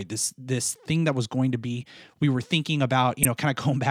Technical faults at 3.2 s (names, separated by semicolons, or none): damaged data in a compressed stream